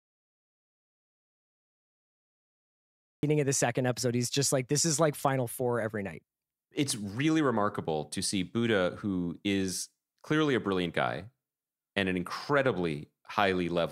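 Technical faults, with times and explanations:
0.00–3.23 s, audio dropout to silence: the clip opens in total silence with no room tone, then speech cuts in mid-phrase at "of the second episode". The input was likely lost while silence was recorded. The waveform shows a dead-flat line, and the spectrogram is completely blank.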